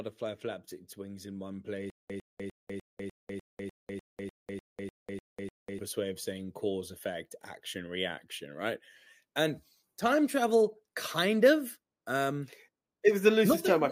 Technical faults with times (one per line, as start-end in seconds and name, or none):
1.90-5.79 stutter with silent gaps